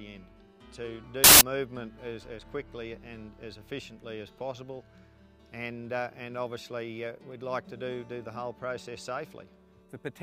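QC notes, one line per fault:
1.24–1.41 s, samples built from the wrong bytes: a sudden burst of loud, harsh broadband noise as sample bytes are misassembled, pushing rapidly changing low bits into each value's high part.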